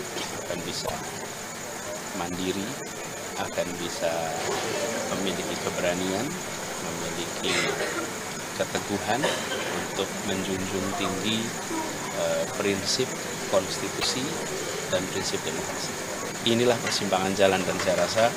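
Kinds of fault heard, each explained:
Broken MP3 bit reservoir: at 0.85 s and 13.99 s the audio skips forward, then a brief chirp, noise burst or gap lasts about 0.06 s, roughly two 26 ms frames. Frames were likely dropped, so the following frames decoded borrowed reservoir bytes from the wrong frame.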